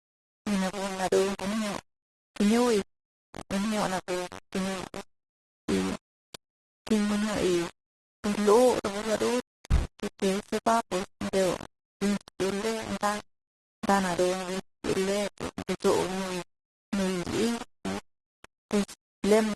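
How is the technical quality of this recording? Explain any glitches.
The technical quality is poor, with two faults running through the entire speech clip.

Low bit depth without dither, throughout: the speech is likely rounded to about 4 bits, so grainy distortion sits only about 10 dB below it. The waveform shows visible stair-steps.

Transcoding between lossy codecs, throughout: different codec artefacts heard together suggest one low-bitrate codec feeding another, such as Vorbis into Opus. The spectrogram shows nothing above 12.1 kHz.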